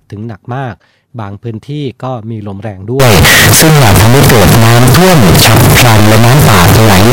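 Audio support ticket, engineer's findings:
From 3.00 s to 7.13 s, speech turns harsh, near-square, very loud, noise level with voice. Likely float read as integer: 32-bit float samples decoded as 32-bit integer.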